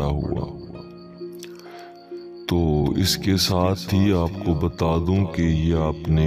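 Nothing in this recording stood out as a technical problem on listening.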